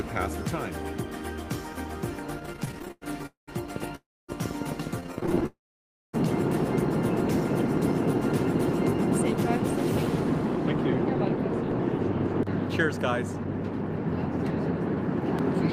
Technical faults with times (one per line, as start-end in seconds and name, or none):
2.39-3.26 repeated stalls (stutter)
3.26-3.49 call audio freeze
3.76-11.72 train of clicks
3.95-4.30 call audio freeze
5.00-5.46 repeated stalls (stutter)
5.46-6.15 call audio freeze